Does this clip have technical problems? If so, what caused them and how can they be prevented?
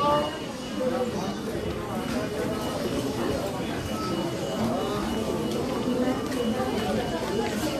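No, no technical faults heard.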